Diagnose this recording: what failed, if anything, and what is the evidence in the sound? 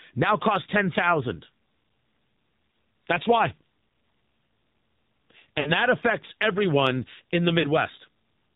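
The codec stage is at fault throughout. This is the AMR narrowband mobile codec, with plainly audible damage: the speech sounds buzzy, thin and synthetic, which fits the 7.4 kbps AMR-NB mode. The encoder models the vocal tract and drives it with a few pulses per subframe, so fine detail is replaced by a coarse approximation. On a spectrogram there is a hard ceiling at 4 kHz with nothing above it, and the harmonics below it look blurred and smeared.

The network stage caused lost AMR speech frames. Radio errors made frames fail their checksum, and the decoder filled each gap by repeating the last good pitch and vocal tract settings at falling gain. There are two events. From 5.60 to 5.72 s, just before "that affects everyone in", the sound is briefly drawn out and then fades, which fits about three lost 20 ms frames. From 7.60 to 7.67 s, just after "affects everyone in the", a shorter warbling dip fits about two lost frames. 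On the waveform, each gap shows the envelope decaying smoothly and then recovering weakly. On the spectrogram, frozen harmonic bands fade before the normal structure returns.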